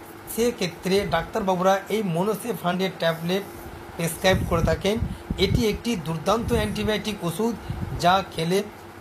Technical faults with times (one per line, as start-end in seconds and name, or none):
2.70-2.75 damaged data in a compressed stream
8.55-8.61 damaged data in a compressed stream